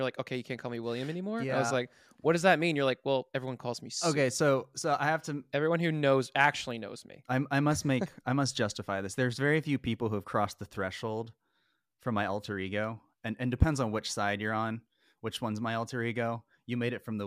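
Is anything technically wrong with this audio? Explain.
No, nothing here sounds technically wrong; it's just a straightforward speech recording with no faults to point out.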